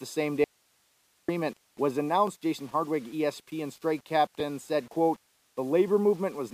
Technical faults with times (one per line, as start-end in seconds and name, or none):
0.00-6.53 low bit depth without dither
0.44-1.28 audio dropout to a faint residue
2.27 block of digital silence